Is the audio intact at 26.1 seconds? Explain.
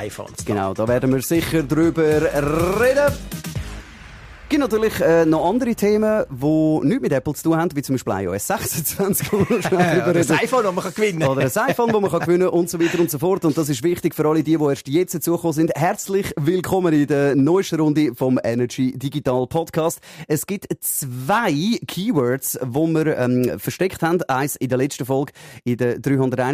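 Yes, at 26.1 seconds the audio is intact, with no dropout, click, distortion or other break in the sound at that point.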